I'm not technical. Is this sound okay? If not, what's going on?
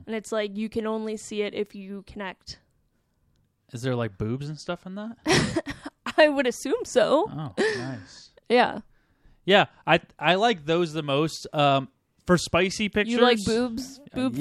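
Yes, nothing in this recording sounds broken or faulty. There's no technical problem to point to anywhere in it.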